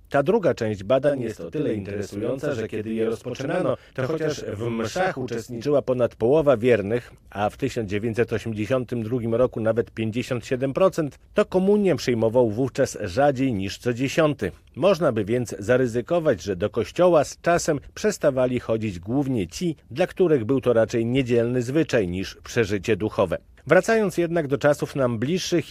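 From 1.09 s to 5.64 s there's channel delay doubling: one channel arrived about 40 ms late, and when the two were folded to mono, that late copy sits alongside the original at the same level. You hear it as a doubled, slapback-style echo trailing everything in that stretch.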